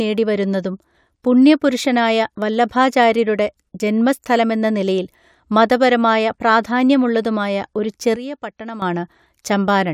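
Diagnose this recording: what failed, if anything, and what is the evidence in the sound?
A sudden gain jump at 8.16 s, just after "നിലയിൽ മതപരമായ പ്രാധാന്യമുള്ളതുമായ ഒരു", drops the level by about 12 dB until 8.82 s. Speech and background noise fall together in one step, with no ramp like AGC. The likely cause is an unramped digital gain change in processing.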